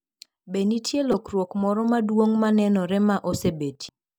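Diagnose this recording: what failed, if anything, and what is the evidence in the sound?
The codec stage failed: damaged data in a compressed stream. The speech carries a brief glitch at 1.12 to 1.14 s and a shorter one at 3.89 s, where the decoder misread corrupted frames before resyncing.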